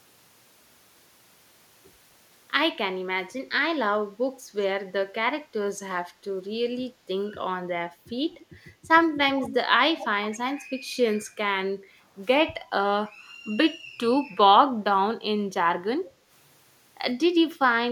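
Echo leak at 8.39–8.45, 9.42–9.56, 9.98–10.08, 10.24–10.38 and 17.55–17.59 s in this speech: brief delayed copies trail the speech by about 150 to 165 ms, about 15 to 35 dB down, likely left by an echo canceller that didn't fully remove the loudspeaker's sound. Background gated by the echo canceller at 11.72–12.13 s and 16.08–16.29 s: the room sound dips by about 11 dB and about 7 dB, respectively, as the microphone is pulled down, then returns.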